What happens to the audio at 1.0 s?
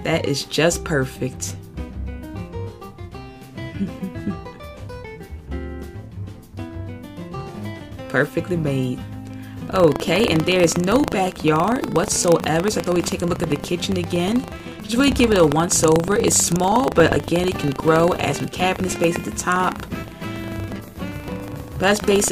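Nothing goes wrong at 1.0 s; the audio plays through that moment intact, with no dropout, click, distortion or other fault to be heard.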